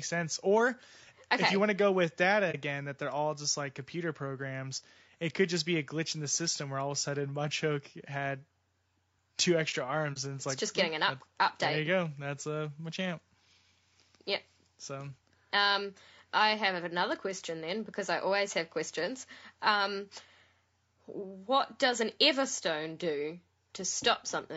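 All the way through, the speech has plainly audible coding damage, likely from low-delay AAC compression of the AAC-ELD kind used in video calls. It sounds rough and grainy, with noise filling in between the harmonics and a top band that's been cut down or filled with synthetic content, which fits a bitrate around 32 kbps.

Then there's AAC frame loss with muting, at 2.51 to 2.56 s and again at 10.13 to 10.17 s. Each is a brief dip of roughly 30 ms, consistent with a single lost frame whose spectrum the decoder zeroed, so the overlapping windows fade the sound out and back in.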